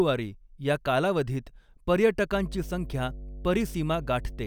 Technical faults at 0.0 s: none

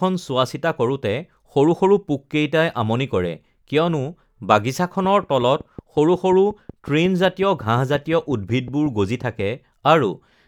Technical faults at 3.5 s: none

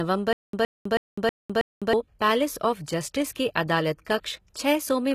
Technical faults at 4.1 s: HE-AAC compression; pre-echo

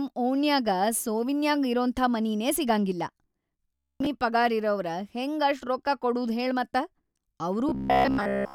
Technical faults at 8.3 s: robotic sound from repeated short buffers

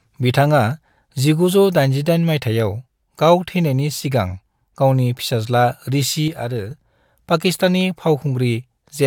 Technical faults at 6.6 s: one channel drops out

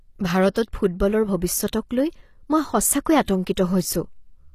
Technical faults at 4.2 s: HE-AAC compression

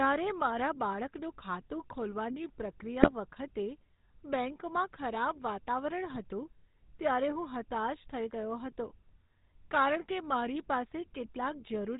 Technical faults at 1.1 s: GSM full-rate codec

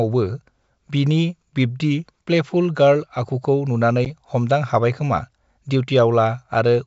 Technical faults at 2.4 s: none

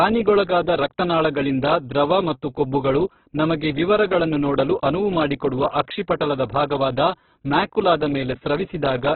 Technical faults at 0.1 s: Opus compression

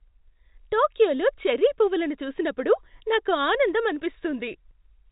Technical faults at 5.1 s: none

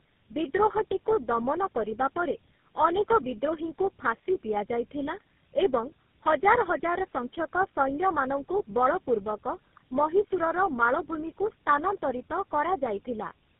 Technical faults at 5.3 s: tandem speech coding

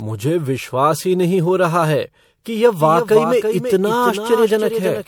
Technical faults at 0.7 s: generation loss

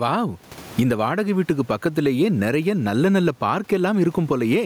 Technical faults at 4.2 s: gain pumping

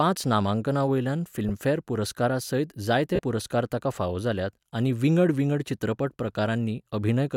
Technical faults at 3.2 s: lost LE Audio frames

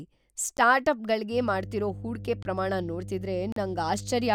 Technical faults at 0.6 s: block of digital silence

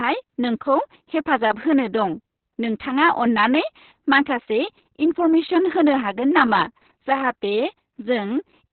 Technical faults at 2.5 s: Opus voice compression

